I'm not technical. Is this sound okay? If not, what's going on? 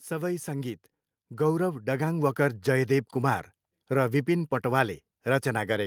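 No. From about 0.07 to 2.68 seconds the whole recording gradually gets louder, a fault called automatic gain rising. The recorder judged the input too quiet and slowly turned itself up. You can tell it's the equipment and not the speaker moving closer or talking louder because the background noise swells right along with the speech, and the rise is a smooth ramp lasting a couple of seconds rather than a sudden jump.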